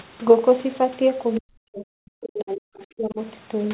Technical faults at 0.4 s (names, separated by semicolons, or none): none